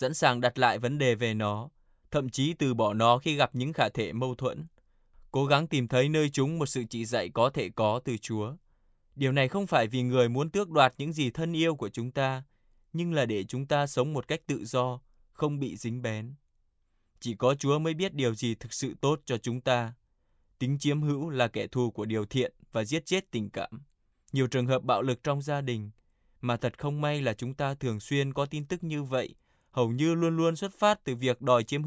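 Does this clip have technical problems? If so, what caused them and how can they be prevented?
No, the speech signal shows no technical faults, so there is nothing here that needs preventing.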